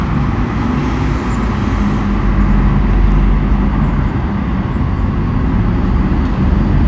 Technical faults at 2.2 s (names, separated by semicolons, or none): none